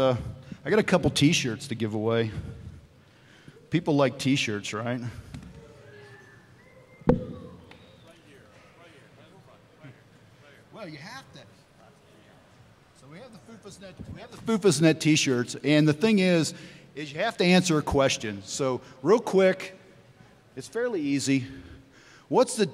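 No technical faults can be heard anywhere in the audio, and the signal stays steady and intact throughout.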